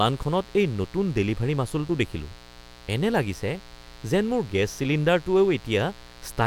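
From start to finish a mains buzz sits under the speech, a steady, raspy drone well below the talker, very roughly 25 dB down. Sharp switching spikes from a dimmer, rectifier or unshielded lead are entering the path twice per 60 Hz cycle, so harmonics of 60 Hz climb into the kilohertz range. A spectrogram shows evenly spaced horizontal lines at multiples of 60 Hz across the whole clip, and the waveform's quiet gaps reveal a regular spike train repeating every 8.3 ms.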